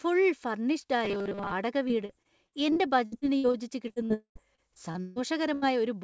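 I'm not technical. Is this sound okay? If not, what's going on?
No, there are several problems.

From 1.05 to 1.53 s the speech turns into a stiff, metallic buzz that still follows the talking roughly. This is robotic sound from repeated short buffers. The likely cause is new audio arriving too slowly, so the software kept replaying the last tiny slice, about 5 ms, instead of the real sound. Most of that half-second is repeats, and the constant repetition forces a flat 200 Hz drone onto the speech.

From 1.88 to 5.18 s the speech is choppy and robotic, with small pieces dropping out again and again. This is repeated packet loss (robotic sound). Chunks of audio were lost or arrived late on the network 18 times in this stretch. Each hole was papered over by stretching the previous sound, the longest patch lasting about 0.15 s. Roughly a fifth of this stretch is filler rather than real speech.

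From 4.14 to 4.37 s the last sound is stretched and fades, and then it goes completely quiet for about a tenth of a second. This is a long network dropout, likely caused by the connection stalling completely. About 0.22 s of real speech never arrived, and when the sound comes back it skips ahead past the missing part.

From 5.54 to 5.64 s the last sound is briefly held in place of the speech and fades down. This is a burst of packet loss. A few chunks in a row, about 80 ms of audio in total, were lost. The receiver stretched the last sound and turned it down until real audio resumed, so that short piece is simply gone.

The call connection itself has nothing above 8 kHz, which is normal for this kind of call.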